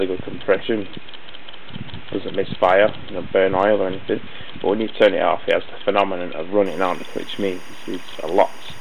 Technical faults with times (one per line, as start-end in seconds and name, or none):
6.66-8.80 timecode bleed